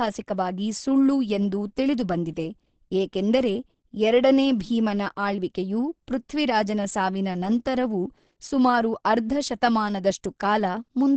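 From start to end, the speech sounds muffled and hoarse. Nothing is heard above 8.5 kHz. The damage is plainly audible. This is likely Opus compression. The sound fits a rate near 16 kbps in its speech mode, which narrows the band and roughens tone.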